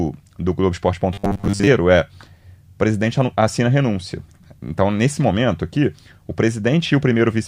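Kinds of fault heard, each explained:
Robotic sound from repeated short buffers: just before "é o presidente assina", speech turns into a rigid 100 Hz buzz, likely a 10 ms chunk replayed through most of half a second.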